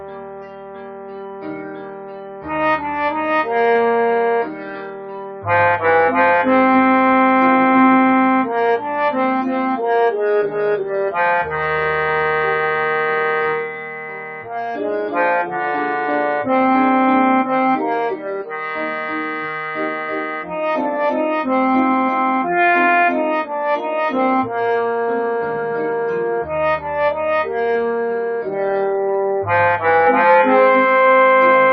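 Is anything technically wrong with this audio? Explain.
Yes. A speech-oriented noise suppressor is working on material it wasn't built for, cutting parts of the sound, and the audio doubles up near the end.

Throughout, the noise suppressor is applied to music or sounds. It treats sustained tones, ambience and decays as noise and pulls them down, with gain swinging by roughly 15 dB. Onsets pass, but held sound sinks, so the result pumps and thins. On a waveform the envelope breathes unevenly. On a spectrogram, steady harmonic lines and reverb tails fade and return in patches instead of running smoothly.

Sound is cut by the noise suppressor in four spans: 0.0 to 2.5 s (deepest drop about 13 dB), 4.45 to 5.47 s (about 12 dB), 13.61 to 14.79 s (about 11 dB) and 18.16 to 20.54 s (about 10 dB). Here the processor judged the content to be noise and attenuated it harder than the rest. Sustained or decaying material sags or has its tail clipped short. 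The waveform shows sudden troughs in level, and the spectrogram shows dimmed, truncated energy across those stretches.

From 30.07 s to the end there is a doubled audio track. A second full-band copy trails the original by around a tenth of a second, roughly 5 dB quieter. It is likely a second capture through a slower path mixed back in. It sounds like a dry, slapback-style echo with no room colour, and it enters abruptly. On the spectrogram every event is repeated as a fainter duplicate just behind it. The waveform shows each transient followed by a smaller twin.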